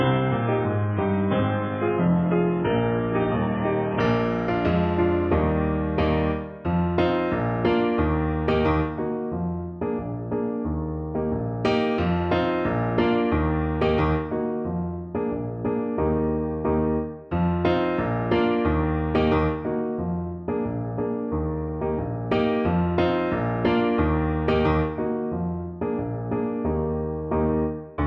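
Adaptive stream starting at a low bitrate: until 4.0 s the spectrogram is empty above 3.7 kHz, then treble fills in abruptly, without a gap.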